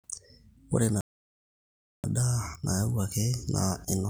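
At 1.01 s the speech cuts off mid-flow and the output stays silent until 2.04 s, a gap of about 1.03 s. This is a playback stall: the sound simply halts, with no fade or noise filling the hole, and then resumes. The likely cause is the player running short of buffered data or having its playback thread blocked, so nothing reached the output until the stream recovered.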